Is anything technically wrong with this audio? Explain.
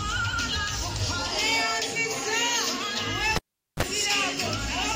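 Yes. At 3.36 s the cable gets pulled and plugged in: a pop, about 416 ms of near silence, then a short 32 ms burst of 50 Hz mains buzz as the tip alone makes contact and picks up hum. A second pop lands as sound returns around 3.83 s.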